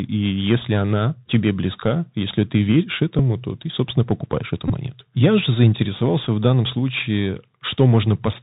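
Speech heard through the Bluetooth CVSD headset codec all the way through, and the damage is plainly audible. Nothing gets above 4 kHz, so it sounds boxy and narrowband. The s sounds come out scratchy, and a grainy hiss sits under everything. That comes from the one-bit up/down coding, whose adaptive step can't keep up with fast, loud high content, which fits a 64 kbps CVSD link. On top of that there are three spots where a Bluetooth headset packet was repeated: lost voice packets were filled by decoding the previous packet's bits again. At 3.19 s, between "близка если ты веришь" and "то ты собственно покупаешь", about 7.5 ms is patched, which sounds like roughly two packets. At 4.68–4.71 s, right after "ты собственно покупаешь эту", it's 15 ms, pointing to about four repeats in a row, so you get a short buzzy blip near 267 Hz. At 6.24 s, just before "в данном случае", a single 3.8 ms repeat is just a small tick.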